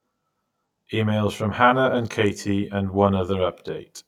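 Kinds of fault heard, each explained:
Channel delay (comb filtering): one channel lags by around 20 ms, so summing to mono leaves the speech rough or slightly doubled, with evenly spaced notches from near 30 Hz showing as fixed horizontal stripes on a spectrogram.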